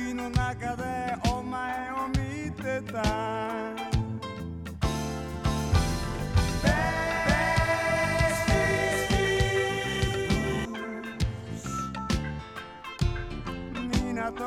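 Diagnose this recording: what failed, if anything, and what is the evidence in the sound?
From 5.33 s to 10.65 s the sound plays twice: a full-band copy about as loud as the original trails it by roughly 0.7 s, starting and stopping abruptly with no decay or room colour. This doubled audio track is likely a second, slower capture path or an out-of-step edit layering two copies.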